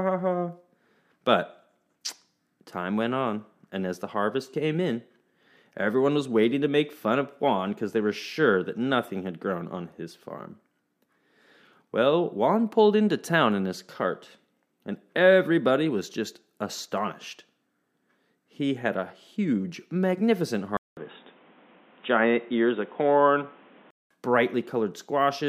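At 20.77 s the speech cuts out for about 0.2 s, then returns dull and boxy, with a new background noise sitting roughly 30 dB below the signal, though the level stays much the same. This is likely an input switched to a poorer device, with the system dropping to a narrower-band microphone or headset call profile mid-recording. The band-limited, noisier sound continues until 24.11 s.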